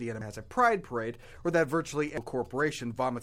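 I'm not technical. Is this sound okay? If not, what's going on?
No. At 0.21 s, just before "has a pride", there's a brief chirp or blip. That's damaged data in a compressed stream: part of the stored file was corrupted, so the player briefly lost its place and searched for the next readable chunk. A second blip like it comes at 2.18 s.

From 1.14 s to 2.70 s, right after "has a pride", a faint galloping ticking and buzzing runs under the speech. These are GSM signalling bursts: a nearby mobile phone was exchanging short radio messages with the network, and the recording equipment picked up that interference as a pulsing buzz at about 217 times per second.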